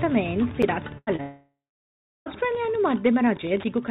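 Running under the whole clip is a faint, steady ticking close to ten times a second, about 25 dB below the audio. That is Wi-Fi interference: a nearby radio's beacon, repeating every 102.4 ms, is being rectified by the audio circuit. Its clockwork regularity and constant level separate it from codec or network faults, which come and go with the signal rather than marching on at a fixed rate. The audio itself stops sharply above 4 kHz, which points to a narrowband call path such as G.711 A-law at 64 kbps. At about 0.62 s there is a single tiny click, a block of digital silence lasting under 9 ms. The sound cuts out and returns with no fade. Nothing fills that hole, which tells it apart from the packet-loss events that follow. From 0.98 to 1.10 s comes a burst of packet loss. The last sound is held and faded for about 88 ms, and the audio then resumes roughly 90 ms further on. The held buzz or hiss and the skipped stretch mark it as concealment, not a dropout to silence. 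Between 1.16 and 1.22 s, a short concealed packet loss gives a brief smear. About 27 ms of continued sound covers 30 ms of missing audio before it blends back. It is too short to become a held tone, so it registers as a wobble. From 1.22 to 2.29 s the sound first turns into a fading continuation, then goes quiet for around 0.72 s, and returns with about 1.05 s of material gone. The likely cause is a long network dropout. Its length and the settling into silence, not merely a fade, distinguish it from the shorter bursts.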